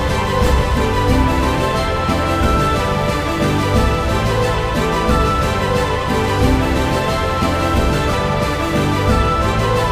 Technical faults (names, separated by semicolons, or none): computer activity noise